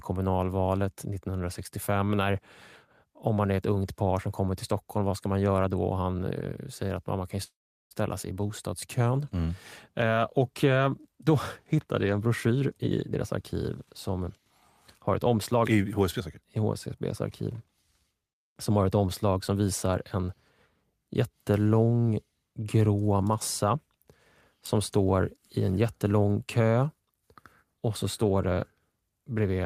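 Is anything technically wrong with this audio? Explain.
Yes, there are two kinds of fault. From 7.43 to 7.94 s, just after "säger att man kan", there is a call audio freeze: the sound stretches into a fading buzz or hiss, then about 0.39 s of silence, and resumes at "sig i" with nothing lost. This likely happened because late packets drained the jitter buffer, which explains why the sound is delayed rather than cut. From 12.60 to 14.46 s, after "hittade jag en", and again from 15.00 to 16.64 s, there is a jitter buffer speed-up. Tiny pitch-period slices are trimmed to shed excess buffering, roughly a third and then a sixth of a second. The speech runs at 117% and then 108% speed, sounding hurried but keeping the same pitch, unlike resampling.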